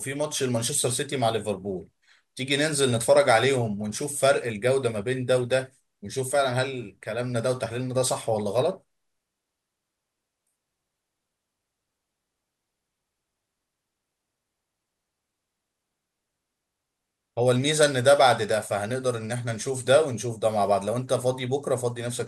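No technical faults can be heard anywhere in the recording: the speech signal holds steady and continuous from the first moment to the last.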